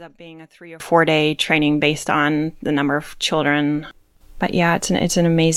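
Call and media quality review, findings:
0.0–0.8 s: speech drops about 23 dB in mono, leaving a faint residue. Likely one channel inverted, so shared centre content cancels on summing.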